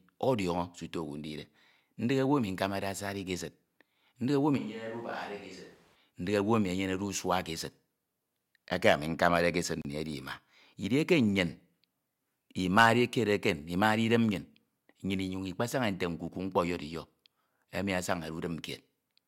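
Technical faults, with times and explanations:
4.59–5.94 s, switch to a distant microphone: sound abruptly turns hollow, roomy and about 10 dB quieter, likely a far microphone; spectrogram shows thinned bass and a raised noise floor.
9.82–9.85 s, Bluetooth stall: sound cuts to 33 ms of silence, likely a drained headphone buffer awaiting resent packets; a flat waveform gap and blank spectrogram strip.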